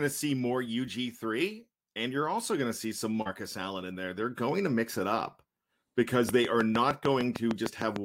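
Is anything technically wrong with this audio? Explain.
Yes. A train of clicks runs from 6.29 to 7.97 s. About ten sharp, near-identical pulses arrive at a regular 6.58 per second, standing well above the speech. Interference from nearby equipment or a faulty connection or power supply is the likely cause. It sounds like steady ticking over the voice.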